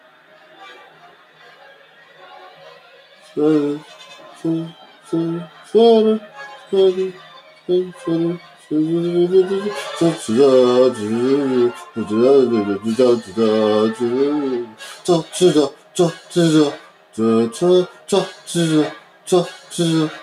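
A speech-tuned noise suppressor runs over the whole clip, treating held tones, ambience and decays as noise. Its gain swings by roughly 10 dB, so sustained sound pumps and thins while onsets pass. Unlike compressor pumping, this follows steadiness rather than loudness.

The sound is cut by the noise suppressor from 0.0 to 8.7 s, 14.64 to 17.17 s and 17.88 to 20.22 s, sinking by about 10 dB in the deepest spots. For several seconds in the first span and shorter stretches later, tails are clipped short rather than dropping out abruptly as in a gap.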